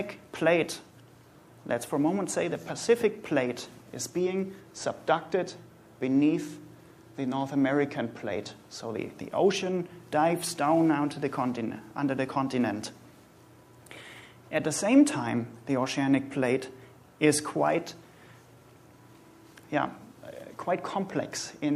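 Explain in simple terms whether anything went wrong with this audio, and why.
Nothing went wrong; no problems can be heard here.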